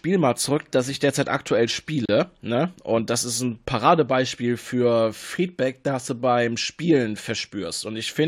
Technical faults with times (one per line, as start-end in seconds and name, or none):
2.06-2.09 gap between stream segments